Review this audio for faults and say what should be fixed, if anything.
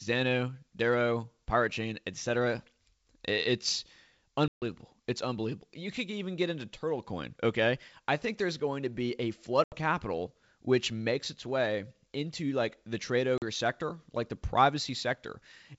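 Packet loss on an ADPCM call struck three times: about seven packets (140 ms) at 4.48–4.63 s, 80 ms at 9.64–9.78 s between "to be a flood" and "capital which makes its", and 40 ms at 13.38–13.43 s between "into like the trade" and "sector like the". The missing packets were filled with silence, so the decoder's adaptive predictor and step size lost track of the sender's. Each gap is an abrupt hole, and the speech after it resumes with brief, slight distortion until the decoder re-converges. Add packet loss concealment that also resets or re-synchronises the ADPCM decoder state, and protect the link with jitter buffering or redundancy.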